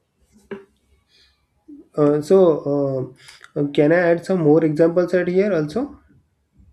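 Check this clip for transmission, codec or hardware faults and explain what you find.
No faults detected.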